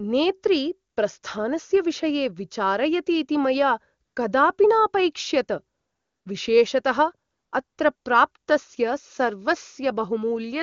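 AMR comfort noise replaces the real background at 0.91–0.95, 1.19–1.21, 4.05–4.15 (right after "विषये विचारयतीति मया"), 5.77–6.25, 7.31–7.51, 7.63–7.77 and 7.95–8.05 s. The sender judged those moments silent and stopped transmitting speech frames, and the receiver synthesised a smooth, steady hiss. Unlike a dropout, these gaps are filled with noise rather than going dead.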